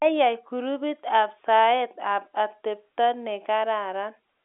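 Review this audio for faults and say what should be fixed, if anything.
Nothing needs to be fixed, as no faults turn up in this audio.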